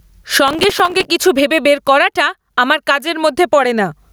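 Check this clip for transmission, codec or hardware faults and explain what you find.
Two faults stand out in this speech clip: gain pumping throughout, and a burst of processor overload crackle near the start.

Gain pumping runs through the whole clip. The level swings by something like 25 dB, so loud and quiet passages sound squashed together. The likely cause is input gain set far too high, with a fast limiter or compressor dragging the level down on every peak.

Processor overload crackle appears from 0.48 to 1.05 s, just before "কিছু ভেবে বের করাটা". The sound turns gritty and torn, with a rapid crackle riding on it. The processor missed dozens of buffer deadlines over that stretch, with buffers of around 3 ms, and each miss replayed a scrap of old audio with hard edges.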